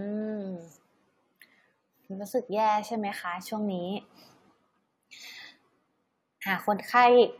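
Nothing in the recording stood out as a technical problem on listening.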